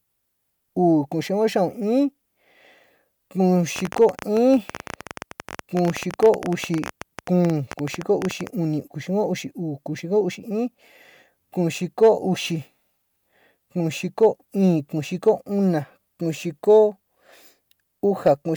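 From 3.76 to 8.48 s a train of clicks runs over the speech at about 14.7 per second, irregularly spaced, some 70 in all, peaking roughly 10 dB above the signal. Likely interference from nearby equipment. It sounds like uneven ticking, including in pauses.

Hard clipping flattens brief peaks at 4.01–4.06, 6.24–6.29, 12.03–12.09, 14.23–14.26, 15.28, 16.70–16.78 and 18.27–18.32 s. The signal exceeds the stage's limit by 1 to 3 dB, and the cut tops add high harmonics, heard as short crackle on loud syllables.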